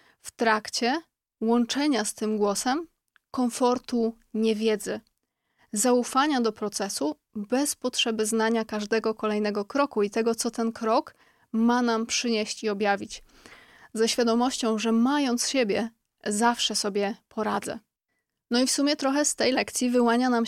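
No technical faults can be heard anywhere in the speech recording; the signal holds steady and intact throughout.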